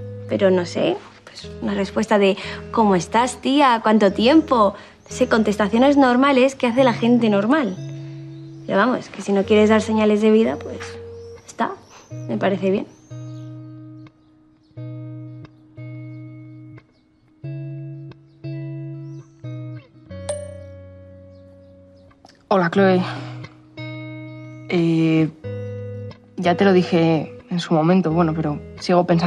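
Nothing stood out on listening; no technical problem could be heard anywhere in the audio.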